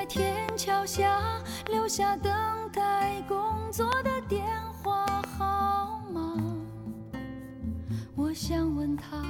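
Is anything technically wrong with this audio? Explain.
Yes. Loud pops occur at 0.49–0.51, 1.67–1.69 and 3.92–3.95 s, with a double pop at 5.08–5.26 s. They sit well above the sound, which continues underneath, peaking around 15 to 20 dB higher. They are likely caused by sudden voltage pulses from a switch, static or a driver glitch. Each looks like a tall spike on the waveform and a thin vertical broadband stripe on the spectrogram.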